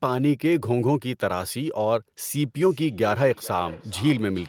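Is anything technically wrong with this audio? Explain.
Yes. From 2.42 s to the end of the clip at 4.49 s there is feedback echo between two devices. Two endpoints on the same call are in one room: one plays back what the other's microphone sent, and that microphone picks it up again. Each echo canceller only removes its own device's output, so the loop survives. The speech returns at an interval of roughly 400 ms, thinner and more ringing, peaking at about 21 dB below the direct speech.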